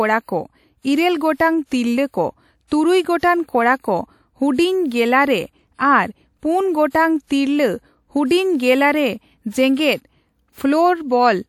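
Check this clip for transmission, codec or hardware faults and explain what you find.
Pre-echo is present in the speech at 1.34–1.40 s, 3.19–3.23 s, and 6.90–6.95 s just after "ᱟᱨ ᱯᱩᱱ". A 41–57 ms hiss precedes each sharp attack, softening it. This happens because the transform codec spreads block-wide quantisation noise into the quiet moment before the attack.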